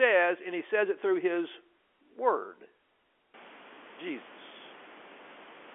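This speech clip has no technical fault. Room noise in the recording rises by about 23 dB around three and a half seconds in and then sits about 23 dB below the speech, and the G.711 A-law telephone coding limits the sound to the line band of roughly 250 Hz to 3.4 kHz.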